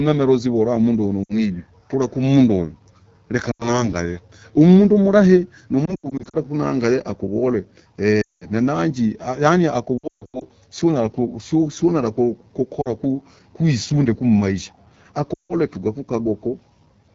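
AMR wideband (HD Voice) codec compression runs through the whole clip. The speech is modelled only up to 6.4 kHz with noise-filled highs, and its plainly rough, raspy texture points to one of the low rates, around 8.85 kbit/s.

Lost AMR speech frames occur at 1.24–1.37, 3.51–3.89, 5.86–6.36, 8.21–8.47, 9.98–10.44, 12.81–12.89 and 15.34–15.54 s. The decoder reuses the last good settings with falling gain, so the audio drops to near silence within two frames, then returns briefly rough. The heaviest losses are near 5.9, 8.2 and 10.0 s.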